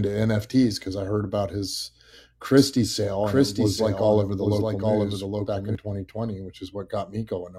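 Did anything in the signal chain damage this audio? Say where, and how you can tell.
Yes. From 2.57 s to 5.75 s the speech is doubled. A second, full-band copy trails the original by roughly 0.7 s, about 5 dB quieter. It carries no decay or room colour, so it is not an echo. It starts and stops abruptly at those times. This is a doubled audio track. The likely cause is the same signal being captured again through a slower path, or an edit leaving two misaligned copies mixed together.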